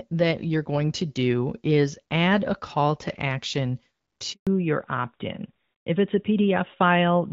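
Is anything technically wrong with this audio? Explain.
Yes, there are two related problems in this speech clip.

Handover gap: right after "a call to action", the audio cuts out from 4.33 to 4.47 s, a 140 ms hole. The call was passed between networks and no speech frames arrived during the switch, so the voice drops away quickly and anything said in that stretch is lost.

Fallback to narrowband: from 4.47 s to the end, everything above 4 kHz is gone, and the speech sounds duller and a bit rougher. This fits the call dropping from HD Voice, with AMR-WB at around 12.65 kbit/s before the handover, to the older AMR-NB narrowband codec after it.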